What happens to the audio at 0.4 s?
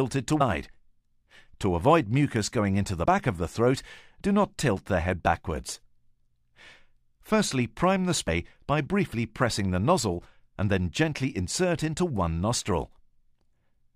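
At 0.40 to 0.42 s there is damaged data in the compressed stream. The decoder misreads the corrupted frames, loses sync and hunts for the next valid frame header, and the audio comes out as a brief squawk or blip lasting about 20 ms.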